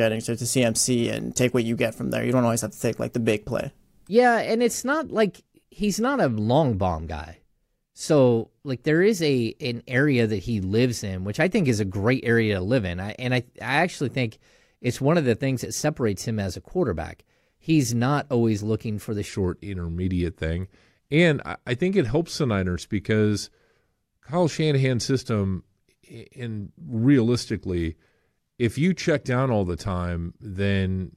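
From 19.29 s, just after "always looking for the", to the end, a section at the wrong speed plays at 0.867 times, likely from a wrong playback clock. It sounds about three semitones deeper and slower; unlike a pitch shift, tempo drops too.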